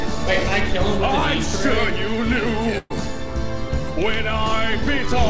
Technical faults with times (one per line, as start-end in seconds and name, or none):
2.78-2.92 burst of packet loss